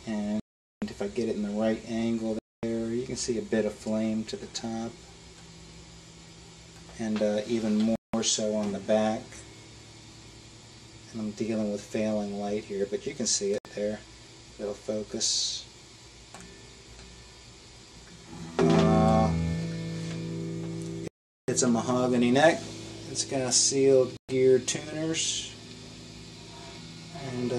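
The audio drops to silence and then picks up again at 0.40 s (420 ms), 2.39 s (241 ms), 7.96 s (179 ms), 13.58 s (66 ms), 21.08 s (404 ms) and 24.17 s (119 ms). These are likely Bluetooth stalls. Interference delayed packets, so the headphones' buffer ran empty and playback waited for the retransmissions to arrive.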